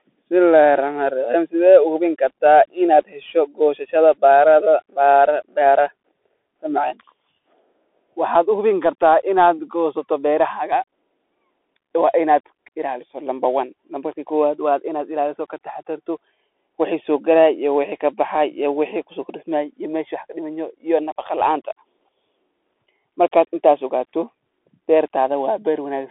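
Throughout the speech, the sound carries the signature of a Bluetooth CVSD headset codec. The band is confined to roughly 300 Hz to 3.5 kHz, with nothing above 3.8 kHz. The coding damage is plainly audible: s sounds turn scratchy, loud bright passages outrun the adaptive step and distort, and a granular hiss sits under the speech. This points to a one-bit delta modulator at 64 kbps, whose step size cannot track fast high-frequency energy.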